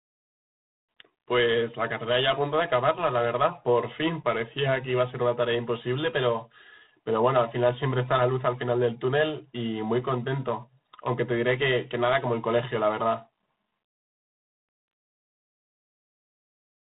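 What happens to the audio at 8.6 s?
G.726 ADPCM coding runs through 8.6 s and the whole clip: coarse prediction-difference steps, consistent with 24 kbit/s, add a harsh rasp tracking the speech, with nothing above 3.9 kHz.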